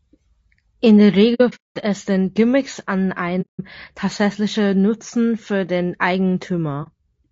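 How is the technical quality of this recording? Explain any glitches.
The technical quality is compromised: the speech carries plainly audible coding damage throughout, and there are three dropouts where the sound fades out.

Low-delay AAC compression runs through the whole clip. The speech sounds rough and grainy, with noise filling the gaps between harmonics and a thin, somewhat synthetic top band. This is likely AAC-ELD, the low-delay codec used for video calls, at a rate that fits about 32 kbps. Its short frames resolve pitch harmonics poorly and spend bits inefficiently, so at this rate the coder cannot keep the harmonic structure clean.

AAC frame loss with muting causes three gaps. The first runs from 1.34 to 1.77 s and is broken up: about 300 ms of sound is missing, scattered across 420 ms, with the longest silent stretch around a fifth of a second. A second gap lasts 180 ms, from 3.41 to 3.60 s. 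A brief 30 ms dip occurs at 6.83 to 6.88 s. In each, the decoder zeroed the spectrum of the lost frames, and the overlapping windows fade the sound out and back in, so the dropouts have soft edges.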